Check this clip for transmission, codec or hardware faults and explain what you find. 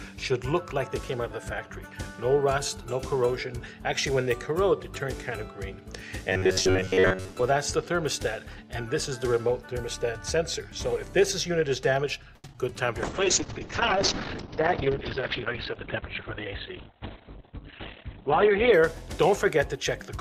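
Four separate faults show up, all in the second half of the clip except the first.

From 6.29 to 7.41 s there is robotic sound from repeated short buffers. The likely cause is new audio arriving too seldom, so the output repeats its last short block in place of the missing material for roughly two thirds of this stretch. The repeats form a rigid, metallic buzz at 93.8 Hz, which fits a block of about 10.7 ms.

From 12.35 to 12.58 s there is repeated packet loss with a robotic sound. Four holes in quick succession are patched by stretching the previous sound, with 40 ms simply missing. About half of this short span is filler, the longest gap being 85 ms, so the sound turns choppy and mechanical.

From 13.03 to 18.80 s there is a call bitrate drop. The encoder's budget fell steeply, which fits a drop from around 128 kbps to about 9 kbps, and the audio band narrowed from 20 kHz to 4 kHz for the whole stretch. 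The sound becomes muffled and coarsely coded.

From 15.16 to 16.89 s, inside that low-bitrate stretch, there is a jitter buffer speed-up. The receiver held too much audio and trimmed short pitch-period pieces repeatedly, about a tenth of a second in total. Playback runs at 105% speed with unchanged pitch and sounds hurried.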